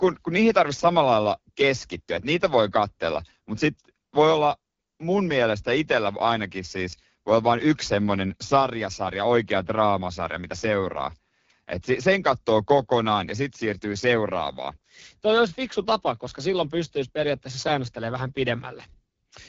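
This speech clip has been through the AMR wideband (HD Voice) codec at a low rate, which fits 8.85 kbit/s, for its whole length. The codec rebuilds speech up to 6.4 kHz from a pulse-excited vocal tract model and fills the top band with shaped noise, and at this low rate the model cannot follow the voice closely. The result is plainly audible roughness and rasp, with nothing above about 7.3 kHz.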